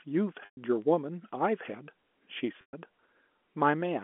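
Packet loss with pitch repetition strikes this telephone-band speech twice, from 0.45 to 0.57 s and from 2.61 to 2.73 s. Each time about 120 ms of audio goes missing, which fits roughly four lost packets, and the receiver fills the hole by looping the last pitch cycle while fading it down, so the sound briefly hangs as a buzzy tone, fades into silence, and the speech returns with a short cross-fade. A bit error spike at 0.82 s comes from a single flipped bit in one sample, which makes that sample's value jump by a power of two and straight back, producing one sharp, broadband tick that has nothing to do with the speech around it. The narrow band, roughly 250 Hz to 3.4 kHz, fits G.711 A-law telephone coding.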